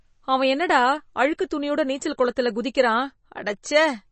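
Throughout, the speech sounds watery and swirly with nothing above about 8.3 kHz, likely MP3 compression at a low bitrate, which fits roughly 32 kbps.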